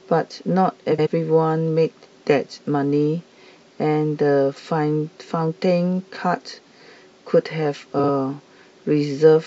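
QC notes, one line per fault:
0.91–1.07 s and 7.99–8.08 s, frames out of order: in each span two adjacent blocks of speech play in reverse order, about 70 ms each at the first point and about 46 ms each at the second, which fits groups of three and then two codec frames delivered and decoded in swapped order. Each swap produces a brief garbled flutter. No time is lost.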